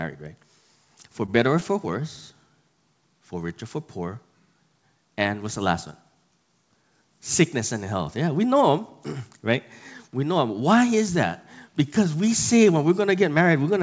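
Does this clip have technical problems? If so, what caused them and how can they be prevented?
Yes. There is one short stall from a late packet, from 1.26 to 1.30 s, just before "better or". A packet missed its playout time, the jitter buffer ran dry, and the receiver stretched the preceding sound by 20 ms until it arrived, so nothing is lost but playback now runs about 20 ms later. On a waveform the cycles just before that point repeat with a slight level dip; a spectrogram shows frozen, smeared harmonics under the 8 kHz ceiling of the G.722 call path. A slightly deeper or adaptive jitter buffer and a steadier network route would prevent it.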